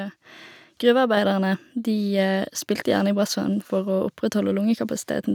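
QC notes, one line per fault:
1.17 s, microphone volume stepped up: the call software judged the microphone input too quiet and raised the device's capture volume in a single jump rather than a gradual ramp, so the speech and the room background both become about 4 dB louder at the same instant. Because the change is applied at the hardware input ahead of any processing, nothing smooths it, and the level shift is audible as an abrupt step.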